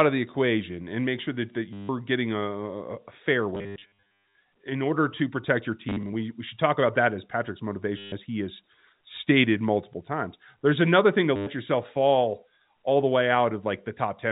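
Speech carried over a G.711 A-law telephone path, band-limited below 4 kHz, is broken up by packet loss with the last packet repeated. The receiver replays the previous packet while it waits for new data, giving a robotic stutter with a buzz near 100 Hz, which fits 10 ms packets. It occurs at 1.73–1.89 s after "make sure that that", scattered over 3.55–4.35 s, at 5.89–6.13 s, at 7.98–8.12 s before "he has stated multiple", and at 11.36–11.47 s.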